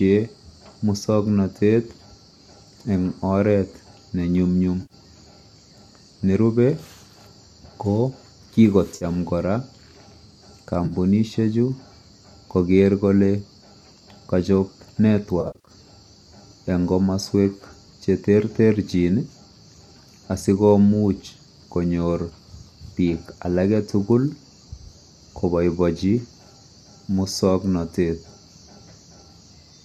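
AAC frame loss with concealment occurs at 4.82 to 4.94 s, 8.96 to 9.05 s, 10.86 to 10.93 s and 15.41 to 15.71 s. In each, the decoder, likely a low-delay AAC stream with roughly 10 ms frames, lost data and patched the gap from the last good spectrum. The first three gaps of 80, 50 and 40 ms sound like brief smeared, noisy patches. The last scatters 200 ms of loss over 260 ms, with the longest run about 70 ms, giving a stretch of repeated phasey smearing.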